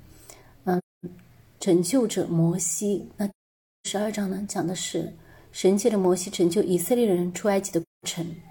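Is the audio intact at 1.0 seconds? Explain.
No. AAC frame loss with muting covers 0.78 to 1.05 s. The decoder zeroed the missing frames, so overlapping windows fade the sound into a soft-edged silent hole.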